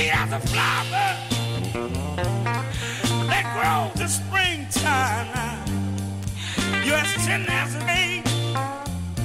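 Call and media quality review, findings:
Compressed frames skipped at 1.3 s, 2.7 s, 4.01–4.03 s and 7.87 s. Audio jumps ahead by roughly 70, 100, 100 and 150 ms. Several whole codec frames are lost or rejected by the decoder.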